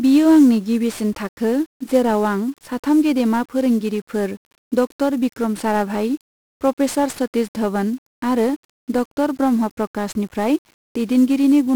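Speech runs through heavy 1-bit DFPWM compression for its whole length. One bit per sample nudges an adaptive level up or down, which fits a 48 kbps stream, so fuzzy crackle rides every syllable. A spectrogram shows a dense broadband noise floor smothering the treble, and the waveform looks jagged and stepped.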